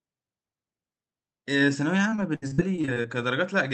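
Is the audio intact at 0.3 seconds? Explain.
Yes, the speech at 0.3 s is intact, carried through the WebRTC call path with only the ordinary band-limited character of the call codec and no fault at that moment.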